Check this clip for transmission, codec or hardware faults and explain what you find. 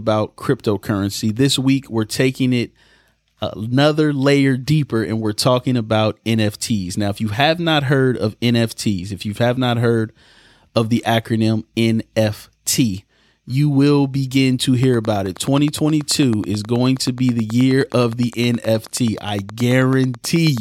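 One hardware-type fault. From 14.8 s to 20.6 s there is a train of clicks: a likely source is interference from nearby equipment or a faulty connection or power supply injecting a pulse about 9.4 times per second. Around fifty evenly spaced, similar clicks tick over the speech and its pauses, peaking roughly 5 dB above it.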